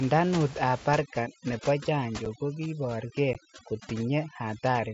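From 0.99 s to the end, the background falls to near silence scattered with twinkling specks. This is overdone noise removal: a noise reducer set too strong pushes individual frequency bands down or off whenever they sit near its noise estimate, and quieter parts of the speech vanish with the room noise.

At 2.25 s and again at 3.33 s, the speech breaks with a short, hard-edged hole that can click. The first hole lasts 7.5 ms and the second 15 ms, which fits one and then two lost packets. This is unconcealed Bluetooth headset packet loss on the mSBC wideband link: nothing rebuilt the missing audio, so silence or an idle pattern filled the space.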